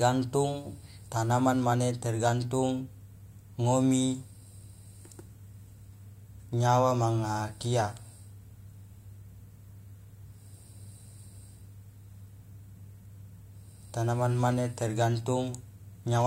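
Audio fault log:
No faults heard in this speech recording.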